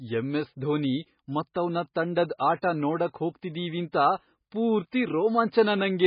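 From start to finish the speech sounds dull and watery, with a swirling, underwater quality and no brightness at all: nothing is audible above about 5 kHz, so s sounds lose their hiss. This is heavy damage from MP3 compression, likely from encoding at a very low bitrate, consistent with around 16 kbps. Short of bits, the encoder cut the treble at a fixed point and discarded weaker frequency detail, which flickers between frames and causes the swirl.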